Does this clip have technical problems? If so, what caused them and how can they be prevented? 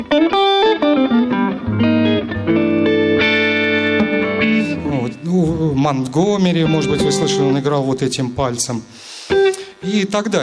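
No, there are no technical problems to report.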